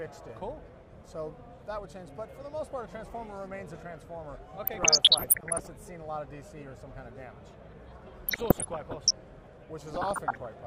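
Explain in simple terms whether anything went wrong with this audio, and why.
Yes, DAB burbling spoils three stretches: 4.66 to 5.67 s, 8.26 to 9.11 s and 9.85 to 10.46 s. Weak digital radio reception lets corrupted data through, so bits of the sound briefly jump in level, giving short blips of noise rather than the clean silent gaps of a dropout.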